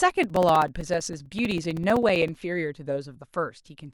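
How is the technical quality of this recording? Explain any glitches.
A rapid, evenly spaced ticking runs through the speech from 0.10 s to 2.41 s, with a click roughly every 64 ms, about forty in all. These are periodic USB or driver dropouts: something stalls the USB transfer or the audio driver on a fixed cycle, so a few milliseconds of signal never arrive and are replaced by silence. Each of these gaps cuts the waveform abruptly, which is why it is heard as a tick rather than a pause.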